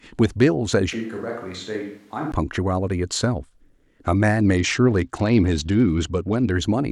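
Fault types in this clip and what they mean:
Switch to a distant microphone: from 0.93 to 2.32 s the speech turns hollow and roomy, drops roughly 10 dB and gains a room-noise floor about 30 dB below the speech, then snaps back. The likely cause is the close microphone dropping out, leaving a farther pickup carrying the sound.
Bluetooth SBC bit pool drop: from 4.56 to 6.53 s the treble goes dull and a gritty grain settles over the speech. The encoder cut its bit pool from 31 to 11, around 83 kbps, starving the upper sub-bands and coarsening the rest.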